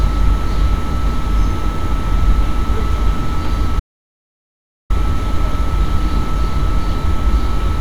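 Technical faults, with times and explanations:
3.80 to 4.90 s, audio dropout to silence: the sound cuts off mid-flow and drops to dead silence, no room tone at all, for about 1.1 s before jumping back in. That's likely the input going away while the recorder kept writing silence, so whatever happened there is lost.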